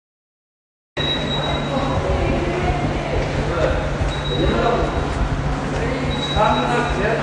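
The first 0.97 s is digital silence, and the sound then arrives already in progress, with no attack or fade. This is a cut-off start: capture began late. Unlike a dropout, nothing precedes the gap, and unlike a fade-in, the level jumps straight to full.

From there to the end the audio carries plainly audible AAC compression damage, likely from AAC-LC at a bitrate around 32 kbps. Nothing reaches above 9.8 kHz, so it sounds dull, and sustained parts warble and fizz. A plain low-pass filter would dull the sound without that swirling texture.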